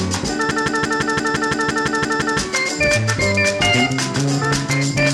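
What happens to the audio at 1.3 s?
At 1.3 s the clip is caught in a system hang loop running from 0.51 to 2.39 s: the system stalled while the audio hardware kept replaying its ring buffer, so one 171 ms slice, which fits an 8192-sample buffer, repeats identically 11 times. At 5.86 Hz it sounds like a machine-gun stutter. Unlike packet-loss concealment, the repeats never fade or vary, and playback resumes with almost nothing skipped.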